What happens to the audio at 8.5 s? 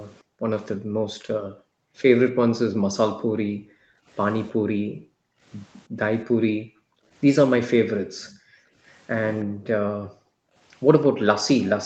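Background gated by the echo canceller runs from 7.86 to 8.78 s. While the far-end loudspeaker was active, the echo canceller clamped the microphone hard, pulling the room sound down by about 40 dB at its deepest. Across roughly 0.7 s of that span the background noise dips or vanishes, leaving near-silence between the speech, then returns once the canceller releases just before 8.8 s.

An echo leak overlaps it, from 8.23 to 9.45 s. A faint, delayed copy of the speech trails the original by about 0.32 s, sitting around 25 dB below it. It sounds like a ghost of the speech arriving late. The likely cause is a loudspeaker on one side whose echo canceller left part of its microphone pickup uncancelled and sent it back down the call.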